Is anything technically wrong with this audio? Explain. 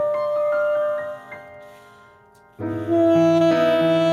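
Yes. Throughout the clip there is gain pumping: the gain ducks by around 10 dB under each loud sound, leaving everything squashed. The likely cause is input gain set far too high, with a fast limiter or compressor clamping down on every peak.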